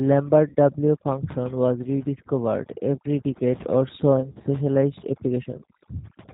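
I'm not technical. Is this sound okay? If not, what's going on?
No, it isn't quite okay. Three separate problems are stacked up here.

First, there's overdone noise removal across the whole clip. A cleanup tool was pushed too hard, so the background drops away and breaks up into twinkly specks, and the quieter parts of the voice got scrubbed away too.

Second, the speech went through the G.729 codec, a squeezed phone-call format, and the damage is easy to hear. Everything above the telephone range is gone, so it sounds muffled, and the voice has a slightly rough, synthetic edge because it's being rebuilt from a simplified model.

Third, there's VoIP packet loss concealed by the speech codec, in two spots. Around 0.49 to 0.55 s, roughly 60 ms of audio went missing and the decoder papered over it with a stretched-out guess that fades. After "every decade or so", from about 4.20 to 4.47 s, around 100 ms dropped out in short scattered bits, giving a brief stretch of fading, weakened sound.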